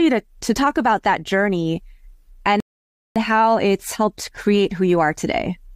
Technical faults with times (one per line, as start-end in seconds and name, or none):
2.60-3.16 rebuffering stall